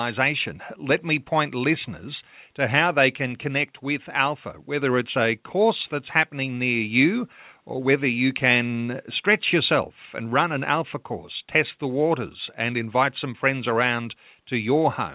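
No technical faults can be heard in this recording.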